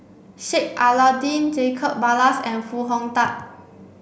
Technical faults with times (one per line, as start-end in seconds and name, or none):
none